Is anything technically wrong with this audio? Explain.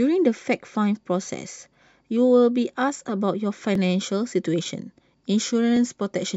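Yes. Overlapping chunks at 1.74, 3.75 and 5.77 s: each 2-second chunk starts 12 ms before the previous one ends, so that sliver replays, causing a regular stutter-click in the speech.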